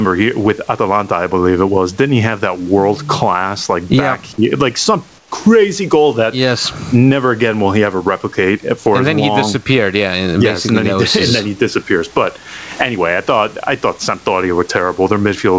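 All the way through, you get gain pumping: loud and soft parts sit closer in level and the sound is squashed, with the gain swinging somewhere around 15 dB. It's likely the input gain is set far too hot with a fast limiter clamping down on every loud sound.

At 5.18 s, for about 140 ms until 5.32 s, the real background drops out and a flat, featureless hiss sits there instead, about 9 dB quieter. That's comfort noise in place of the background, likely because the sender stopped transmitting and the receiver filled the gap.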